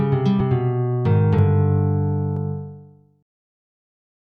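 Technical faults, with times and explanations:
0.41 s, 1.39 s and 2.37 s: audio missing between chunks. Three brief skips, each dropping roughly 20 ms, recur about once a second, and the sound on each side is joined with no gap. This likely comes from a processor losing a sliver at each one-second chunk boundary.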